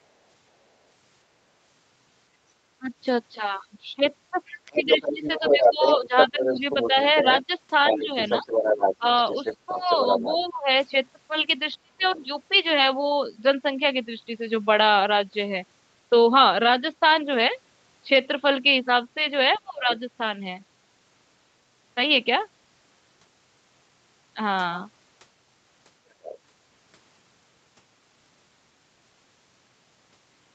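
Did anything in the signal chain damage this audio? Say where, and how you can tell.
Yes. Speech suppressed in double talk, at the call-processing stage: the voice dips about 15 dB in pieces totalling roughly 1.5 s between 2.78 and 9.04 s, and drops about 25 dB at 10.39–10.69 s and 19.59–19.89 s and about 35 dB at 11.82–12.22 s. These dips line up with a second voice, so the echo canceller likely turned both down. Packet loss would leave gaps regardless.

Other side's voice leaking through, also in the echo canceller: a second voice runs from 4.46 to 10.44 s at about the talker's level. Fainter scraps come at 12.16–12.20 s (about 30 dB down), 19.53–19.96 s and 26.22–26.38 s (about 20 dB down). This is likely residual loudspeaker echo. Unlike room reverb, it is a separate voice, not a smeared tail.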